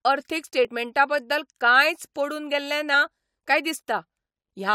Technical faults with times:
0.65 damaged data in a compressed stream
2.93 damaged data in a compressed stream

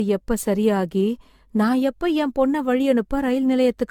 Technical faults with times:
0.00-3.90 generation loss

